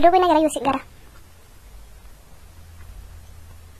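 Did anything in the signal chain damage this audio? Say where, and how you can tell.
Yes. From 0 to 1.06 s the speech runs hurried and about seven semitones high, 1.42 times too fast, likely a section at the wrong speed from a mismatched playback clock.

Throughout, the audio sounds dull and fizzy, with nothing above 13.5 kHz, likely AAC compression at the codec stage, consistent with AAC-LC at roughly 32 kbps.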